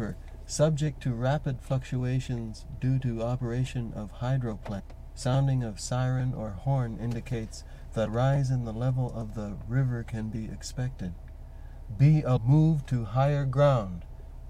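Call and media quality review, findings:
Damaged data in a compressed stream: brief blips of about 20 ms at 4.79, 8.06 and 12.36 s. Decoder misreads corrupted frames and resyncs.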